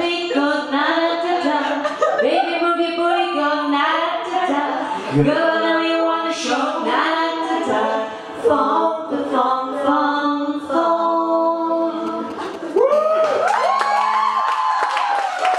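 From 12.07 to 12.93 s, GSM signalling bursts break in as a galloping dit-dit-dit of brief 217 Hz buzzes, well below the signal, a nearby 2G phone signalling in short groups. From 12.93 to 14.41 s, this turns into a continuous GSM phone buzz, a raspy 217 Hz tone about 20 dB down, steady rather than broken because the phone is now transmitting its bursts steadily, 217 times a second, as in a call.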